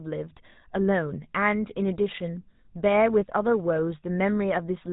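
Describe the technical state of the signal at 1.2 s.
At 1.2 s, as across the whole clip, the speech has the buzzy, gravelly roughness of the GSM full-rate codec, consistent with its 13 kbps rate. Pulse-driven vocal-tract modelling and a 4 kHz ceiling make it sound rasping, not merely muffled like simple band-limiting.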